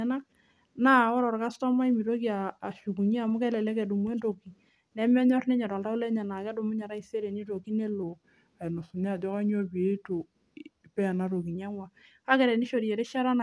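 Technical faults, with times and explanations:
8.03 to 11.55 s, wrong sample rate: the speech slows and drops in pitch together, then returns to normal just before "einyang'ua kaa". It runs at about 0.92 times its proper speed and sits about 1.5 semitones low. The samples are being played out slower than they were captured, with no conversion between the two rates. Pitch and tempo therefore fall by the same ratio. The shift fits audio recorded at 24 kHz and played at 22 kHz.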